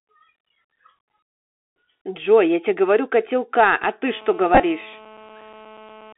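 Speech, carried throughout by a Bluetooth CVSD headset codec: the audio is confined to roughly 250 Hz to 3.5 kHz, consistent with a 64 kbit/s one-bit delta link, with scratchy sibilants and granular hiss plainly audible. Bluetooth headset packet repeats occur between 4.55 and 4.61 s: about 37.5 ms of audio is lost across a 52.5 ms stretch, replaced by re-decoded earlier packets, with runs up to about 20 ms producing a brief buzz near 267 Hz.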